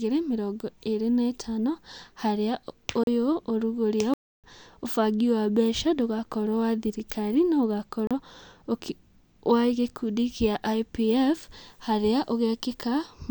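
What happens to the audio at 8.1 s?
At 8.07 s, right after "ndũgakorwo wa thirikari no", the speech drops into a block of digital silence that lasts until 8.11 s, a gap of about 35 ms. A run of samples has been replaced by silence, so the waveform cuts to nothing and resumes abruptly with no fade on either side. The 35 ms gap is long enough to be heard as a brief hole in the speech.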